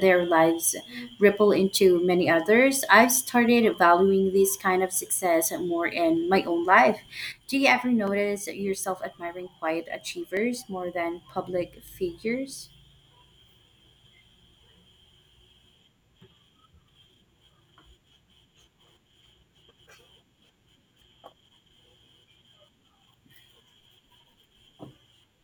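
At 3.74 s, just before "valuing this kind of", a single sharp click is heard. This is most likely dropped samples: well under a millisecond is missing, so the waveform jumps. No audible gap follows, which separates it from a true dropout.

At 7.32 s, right after "in my own life", the sound abruptly falls by about 6 dB and stays lower to the end. This is most likely one channel dropping out of the stereo pair. The step is instant, unlike a fade or gain ride.

The same brief clicks recur at 8.07 s and 10.37 s, with no hole in the sound around either.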